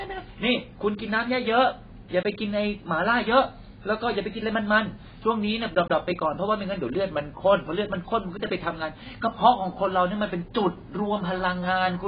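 A speech clip with heavy AAC compression damage from start to finish, likely from AAC-LC at a very low bitrate, something like 16 kbps. Nothing survives above about 4.9 kHz, so sibilants lose their edge and the sound turns dull and muffled, with a warbling, fizzy smear on sustained sounds. On a spectrogram the energy stops at a flat ceiling near 4.9 kHz.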